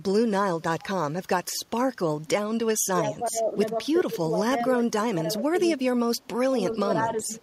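From 3.1 to 3.56 s the speech sinks by about 15 dB, then dips again at 4.01 to 4.18 s and 4.98 to 5.58 s, each by about 20 dB, with further drops of about 15 dB at 6.28 to 6.33 s and from 6.81 s to the end. This is speech suppressed in double talk, likely an echo canceller mistaking the near talker for loudspeaker echo while the far side also spoke. On a waveform the envelope shows sudden notches. A spectrogram shows the energy dropping across the bands.

At 6.2 to 6.27 s a faint, brief echo leak slips through, likely a canceller failing to remove loudspeaker pickup. It is a delayed copy of the voice arriving 398 ms late at about 35 dB below the speech, heard as a scrap. On a spectrogram it appears as a weak repeat of earlier harmonic patterns, barely lifting the waveform.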